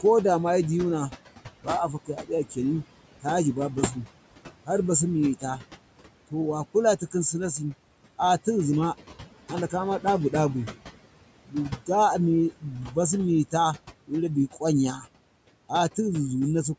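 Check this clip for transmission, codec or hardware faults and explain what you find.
Two faults come from the call's noise suppression; the room noise sits about 15 dB below the speech, and the band stops at 8 kHz.

Noise suppressor artifacts, throughout: the background dips between phrases and swells under speech. The suppressor pulls noise-like bands down by about 18 dB, frame by frame.

Speech cut by the noise suppressor, at 1.63–2.58, 3.22–4.07, 6.31–8.47, 9.48–10.33, 11.44–11.89, 12.6–13.54 and 14.07–15.07 s: soft sounds and endings go faint or swallowed, each time for a fraction of a second. The suppressor mistook them for noise and lowered them by about 11 to 19 dB.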